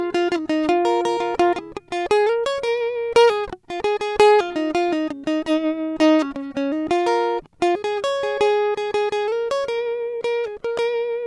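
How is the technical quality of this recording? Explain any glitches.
The music comes through with no audible technical faults.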